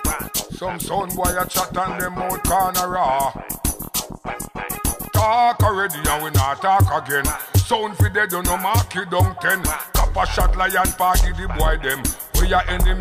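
Nothing stood out as a technical problem on listening to this audio.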